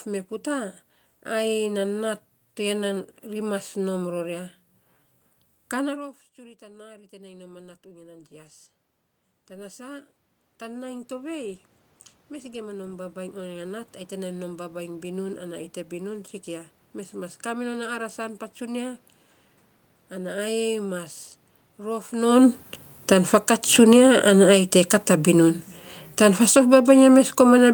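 From 5.93 s the level sags as the talker moves back from the microphone. The input drops by about 23 dB. Automatic gain rising follows. The gain control hears a quiet input and lifts its gain slowly, by about 19 dB, until 15.32 s. The voice and the room noise swell up together over those seconds. The climb settles just before "ai te bibun sikia".

At about 22 s the talker moves. From 21.88 s automatic gain falling sets in. The control finds the input too loud, or its background noise too strong, and pulls its gain down gradually. The voice sinks, and the room noise sinks with it. From 23.36 s to 25.49 s the gain rises again by about 4 dB, a brief swell inside the fall. The downward drift then continues to the end of the clip.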